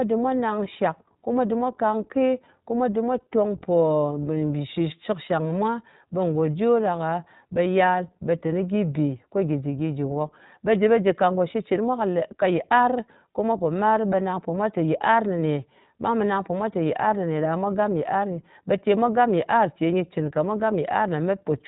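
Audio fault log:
Throughout, iLBC codec: the speech has nothing above 4 kHz and a rough, slightly synthetic texture that is plainly audible. The codec builds each 20 ms frame's excitation on its own, without borrowing from the previous frame, and it runs at 15.2 kbps. A simple low-pass filter would dull the speech without that synthetic grain, and frame-dependent codecs tend to smear across frame boundaries rather than restart cleanly every 20 ms.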